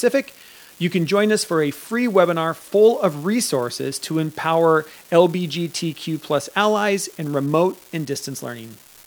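From the very start to the end there's an unreliable data bit: one marginal line flips its bit in a random share of samples, each error a spike of the same size, about -27 dBFS. You hear a steady crackle under the speech that carries on through the pauses.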